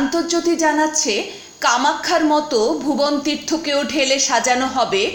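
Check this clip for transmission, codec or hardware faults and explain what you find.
Nothing stood out on listening; no transmission, codec or hardware problem could be heard anywhere in the audio.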